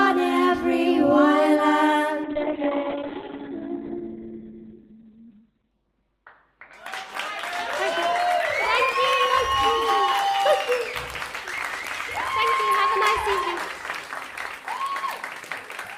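From 2.28 s to 7.03 s the audio goes through a call bitrate drop. The top end collapses from full band to about 4 kHz, and for roughly 3.2 s at its worst the sound turns coarse and watery, consistent with the encoder falling from around 32 kbps to about 7 kbps. Unlike packet loss, nothing drops out or stutters, and unlike a fixed filter, the muffling comes with coding roughness and then clears.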